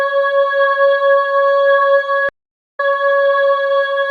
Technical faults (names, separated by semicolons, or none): MP3 compression; stream reconnect